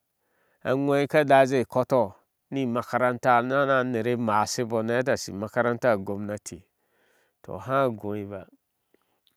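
No dropouts, clicks, distortion or level jumps turn up anywhere in the speech, and nothing in it calls for a technical note.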